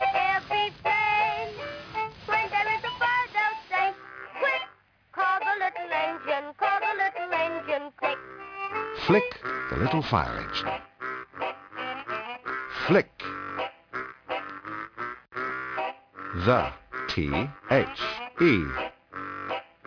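From start to finish, high-frequency content sounds gritty and metallic, with stray tones at unrelated pitches roughly 20 dB below the main sound. The spectrum runs hard up to a 5.5 kHz edge. This is aliasing, and it fits downsampling from 48 kHz to 11 kHz without an anti-aliasing filter.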